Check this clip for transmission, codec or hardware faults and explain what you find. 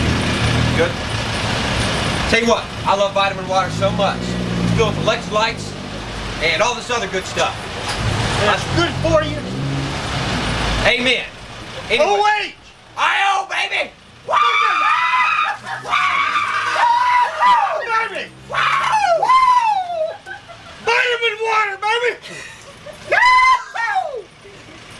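I checked the clip and found no faults to report.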